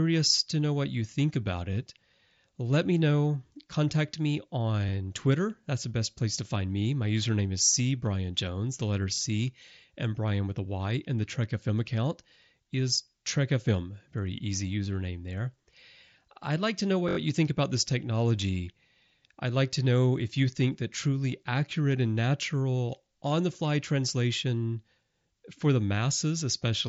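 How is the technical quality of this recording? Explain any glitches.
Two brief stutters occur in the speech; they come from a repeated buffer. The sound passes through a Bluetooth mSBC headset link, so the spectrogram shows nothing above about 7.7 kHz.

At 9.15 s and again at 17.09 s, new audio failed to arrive in time, and the device replayed its last block of about 21 ms, which fits a 1024-sample buffer. The first event repeats it twice, lasting about 43 ms. The second repeats it four times, lasting about 85 ms, so it sounds like a short stutter. On a waveform, identical 21 ms segments sit side by side with abrupt joins. On a spectrogram, each join appears as a thin vertical line.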